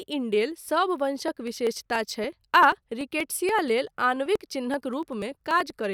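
Speech with periodic USB or driver dropouts from 1.28 s, after "इंडेल सब", to 5.80 s: a few milliseconds skipped every 0.096 s, giving evenly spaced ticks rather than random clicks.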